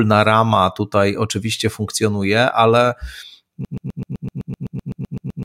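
At 3.65 s the speech locks into a broken-record loop. A tiny slice of about 127 ms starts repeating back to back, 14 times, all the way to the end of the clip. You get a fast, stuttering buzz instead of anything new, and whatever should have followed is simply gone. Most likely the player or stream stalled and kept replaying the last fragment it still had in its buffer.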